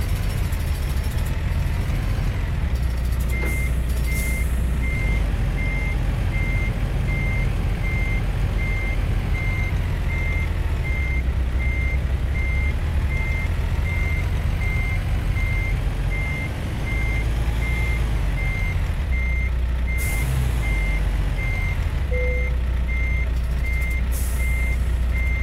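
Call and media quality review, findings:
No audible faults found.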